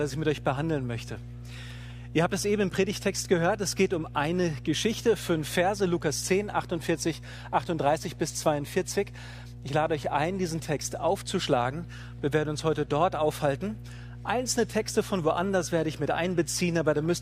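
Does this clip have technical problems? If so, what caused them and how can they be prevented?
Yes, there's mains hum running the whole way through, a steady 60 Hz tone sitting fairly high relative to the sound itself. It comes from a ground loop or a nearby transformer leaking the power line into the signal path. Fix it with balanced cables, a single ground point, or moving away from power supplies.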